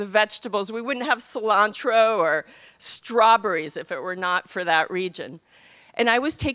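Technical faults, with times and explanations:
No technical faults can be heard anywhere in the signal.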